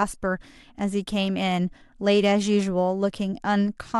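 Speech recording, with no technical faults heard anywhere in the clip.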